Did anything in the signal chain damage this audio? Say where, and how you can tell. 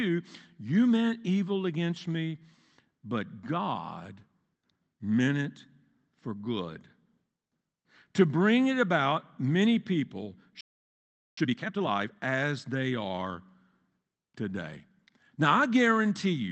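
Yes, at the playback stage. Just after "it about many people" the speech drops out at 10.61 s and stays silent until 11.37 s, roughly 0.77 s. That's a playback stall, likely the player running dry of data or its thread getting blocked.

From 11.37 to 12.13 s the speech then runs at 2x speed with its pitch unchanged, settling back to normal right before "as they are". That's time-compressed catch-up: the player works off its backlog by snipping out small pieces and cross-fading the joins.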